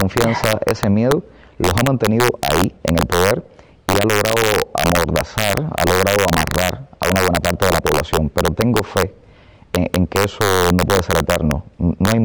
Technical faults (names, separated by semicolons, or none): integer overflow